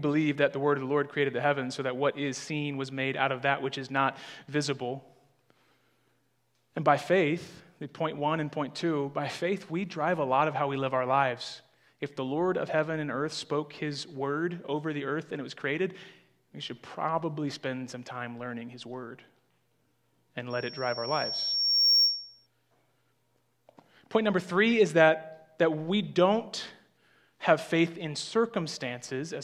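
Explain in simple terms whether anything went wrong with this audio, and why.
Loudspeaker feedback squeal, from 20.5 to 22.47 seconds. A microphone picked up its own loudspeaker, and one pitch, around 5.5 kHz, kept looping back louder. It swells over about a second and a half into a piercing whistle that rises well above the rest of the sound.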